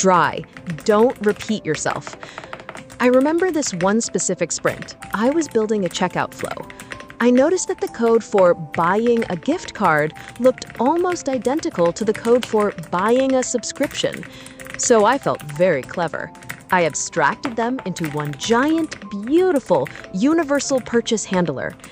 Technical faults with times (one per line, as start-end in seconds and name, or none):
none